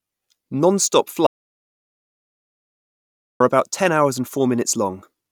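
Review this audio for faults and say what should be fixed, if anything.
An audio dropout to silence runs from 1.27 s to 3.40 s, losing about 2.14 s of speech before "about ten hours and". Unlike a natural pause, the gap holds silence with no room tone, and the speech stops and resumes mid-flow. The recorder kept writing silence, likely because the input link was lost. Securing cables and wireless links, and watching input meters while recording, would prevent this.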